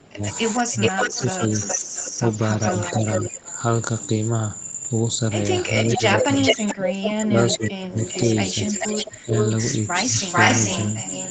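From 0 to 3.48 s the speech dips by up to about 25 dB in places, likely speech suppressed in double talk: the echo canceller, facing both sides at once, turns down the near talker along with the loudspeaker echo. The same dips return at 5.97–6.02 s, 6.75–7.98 s (about 20 dB) and 9.07–9.32 s. From 0.25 to 3.53 s a copy of the speech trails by 429 ms at about 5 dB below it, likely an echo leak from a loudspeaker pickup that was not fully cancelled. It recurs from 5.79 s to the end, delayed 440 ms and about as loud as the speech itself.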